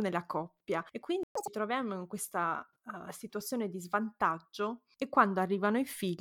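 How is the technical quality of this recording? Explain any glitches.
The recording has two linked glitches early on. Both fall in the space of about a quarter of a second.

At 1.23 s there is a playback stall. The speech cuts out mid-flow and the output goes silent for 120 ms, until 1.35 s. The gap is short but clearly audible as a hole in the sound. It then resumes where it stopped. The likely cause is the player running out of data, or its audio thread being briefly blocked, so nothing reached the output until it recovered.

From 1.35 s to 1.47 s comes catch-up at higher speed. The player works through its backlog by resampling at 2.0 times normal speed. Because resampling shifts speed and pitch together, the speech jumps up by roughly ten semitones and sounds hurried and chipmunk-like. The burst recovers the lost time quickly. After 1.47 s speed and pitch drop back to normal.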